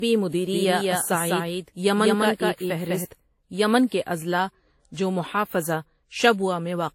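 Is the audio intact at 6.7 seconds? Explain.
No. At 6.7 seconds, as across the whole speech clip, the audio carries signs of transcoding between lossy codecs. Nothing is present above 16.5 kHz, and the artefacts of one codec are heard together with a second set of artefacts. That likely means one encode, one consistent with WMA near 48 kbit/s, was re-encoded as Vorbis near 53 kbit/s. On a spectrogram the top edge is a hard flat shelf.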